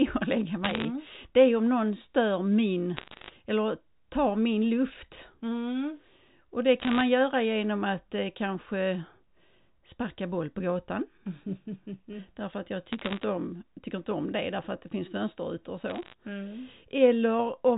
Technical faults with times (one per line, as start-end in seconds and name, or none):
0.65-0.85 bit errors on a digital phone line
2.97-3.30 bit errors on a digital phone line
4.88-4.94 bit errors on a digital phone line
6.80-7.01 bit errors on a digital phone line
12.93-13.24 bit errors on a digital phone line
15.88-16.14 bit errors on a digital phone line